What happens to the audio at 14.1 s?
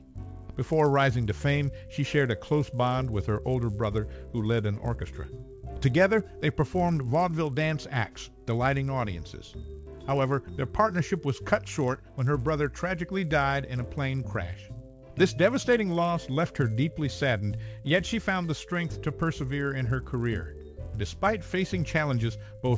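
At 14.1 s the audio carries a 100 Hz buzz from a resampler restarted on every block. It runs through the whole clip. Each 10 ms block is converted alone in a 24 kHz to 16 kHz conversion. Every block edge therefore ticks, present only with signal.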